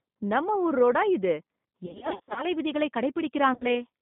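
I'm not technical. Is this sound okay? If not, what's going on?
No. The whole clip has passed through the G.729 codec, a phone-call speech compressor that keeps only up to about 3.7 kHz, so the speech sounds muffled, rough and slightly synthetic.

There is also VoIP packet loss concealed by the speech codec, from 1.86 to 2.46 s and again from 3.54 to 3.66 s. Chunks of the call went missing, and the decoder filled the gaps with stretched, fading guesses.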